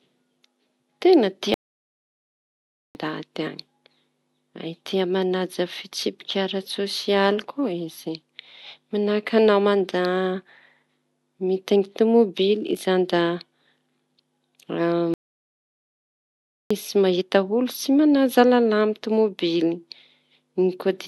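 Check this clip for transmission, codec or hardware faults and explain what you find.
The speech is interrupted twice by a playback stall. From 1.54 to 2.95 s and from 15.14 to 16.71 s, just before "mahita olo tsy manaja", the audio drops out for about 1.41 s and 1.57 s, then carries on. The likely cause is the player running out of buffered data or its thread being blocked, leaving the output silent until it recovers. On a waveform each gap is a flat line, and a spectrogram shows a blank vertical band.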